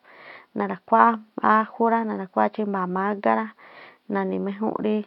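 No technical faults can be heard in the speech; the only other sound is the room's own background noise, which sits about 48 dB below the voice and belongs to the recording space rather than the system.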